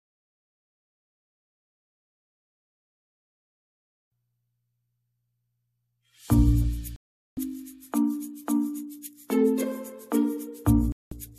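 At 6.96 s the sound cuts to silence for about 0.41 s, and again at 10.92 s for about 0.19 s: a digital broadcast dropout, where the receiver muted through a run of failed frames. The holes are clean silence, not the smeared or repeated fill of packet-loss concealment.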